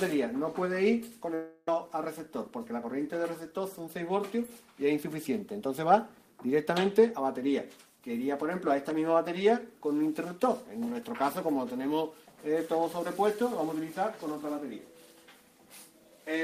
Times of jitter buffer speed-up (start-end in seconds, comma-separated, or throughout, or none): 2.27-2.87